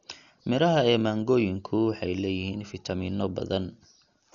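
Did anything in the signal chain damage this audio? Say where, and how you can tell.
Yes, at the codec stage: the speech was likely squeezed through Dolby Digital compression at a very low rate, about what 48 kbps would give. Throughout, nothing reaches above 7 kHz, so it sounds dull, and starved frequency lines filled with dither leave a rough, fluttering hiss.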